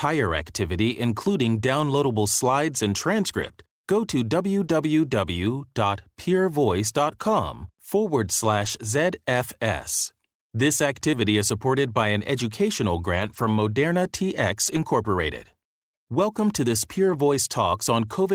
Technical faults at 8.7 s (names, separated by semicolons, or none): lost packet rebuilt from error correction